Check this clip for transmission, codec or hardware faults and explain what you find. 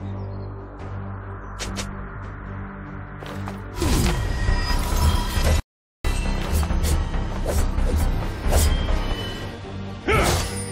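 Two faults are audible. From 5.60 to 6.05 s there is a playback stall: the player was likely starved of data or blocked, so output falls silent for 0.45 s before resuming.

At 7.58 s, compressed frames are skipped: roughly one 23.2 ms frame is missing or rejected as damaged. The sound jumps ahead about 20 ms.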